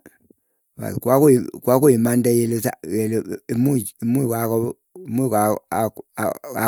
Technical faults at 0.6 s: none

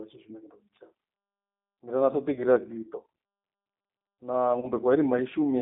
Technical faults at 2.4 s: G.729 codec; VoIP packet loss concealed by the speech codec

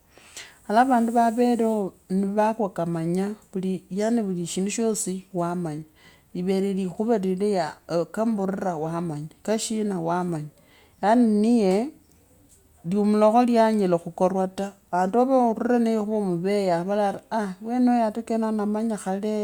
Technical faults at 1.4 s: none

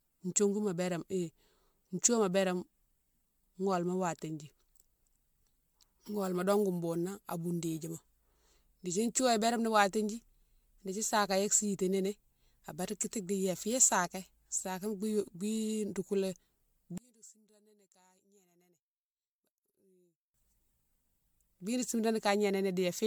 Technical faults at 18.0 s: generation loss; one channel inverted

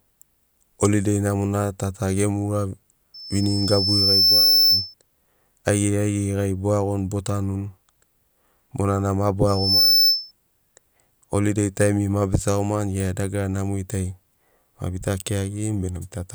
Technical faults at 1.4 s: none

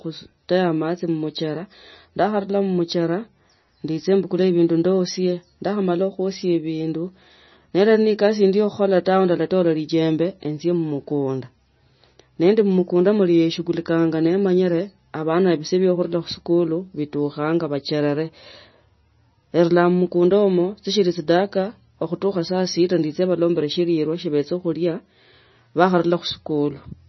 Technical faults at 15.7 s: MP3 compression

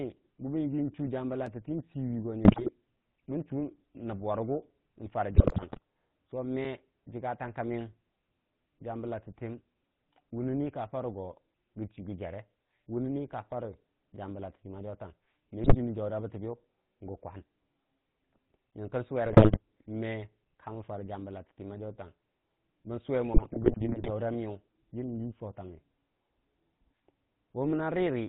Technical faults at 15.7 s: GSM full-rate codec; GSM bit errors

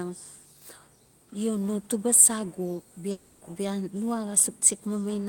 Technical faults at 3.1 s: long network dropout

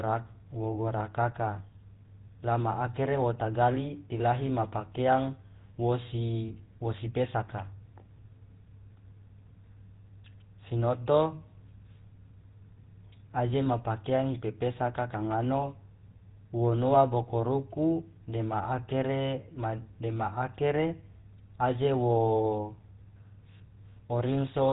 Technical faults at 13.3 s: GSM full-rate codec

